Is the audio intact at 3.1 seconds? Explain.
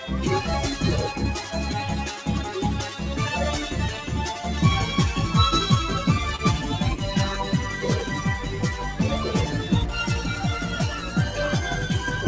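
No. At 3.1 s the sound sits inside a run of repeated timing corrections lasting from 0.42 s to 5.16 s. The receiver keeps inserting tiny repeated slivers, all in the same direction, so playback runs at about 99% speed and gains roughly 70 ms overall. It is heard as faint hiccups and a slightly dragging tempo, not as a single clean dropout.

Behind those corrections is clock drift between sender and receiver, present throughout. The sender's clock runs about one and a half percent slow, so the jitter buffer keeps draining and must be topped up. Unlike a one-off network glitch, these small stumbles recur at uneven intervals across the whole clip.

A noise suppressor built for speech is also acting on the sound at this moment and throughout. It treats sustained tones, ambience and decaying tails as noise and pulls them down by around 5 dB while onsets pass. The result is pumping and thinning, which is different from a steady volume drop or a simple low-pass dullness.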